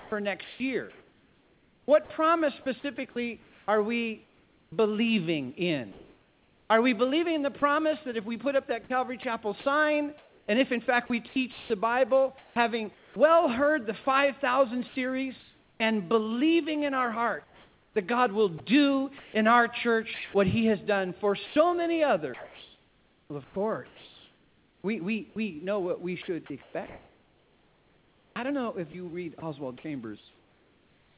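From the start to 15.8 s, and again from 17.44 s to the end, the sound is chopped by the voice detector. The likely cause is a sender-side voice detector toggling on and off, swapping quiet edges and softer passages for synthetic comfort noise, about 4.7 s of it in the first stretch and 5.9 s in the second. You hear it as choppiness. Everything sits below 4 kHz, which fits a G.711-style call path.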